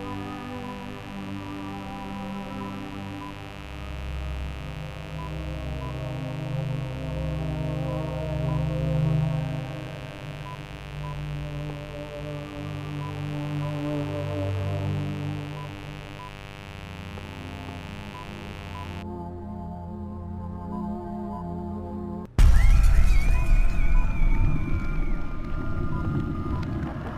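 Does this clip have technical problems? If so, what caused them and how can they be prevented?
Yes. From 0.0 to 19.0 s there is mains buzz: a dimmer, rectifier or unshielded line injects switching spikes twice per 50 Hz cycle, producing a raspy buzz about 15 dB below the sound. Prevent it with shielded, balanced cabling routed away from dimmers and rectifying power supplies.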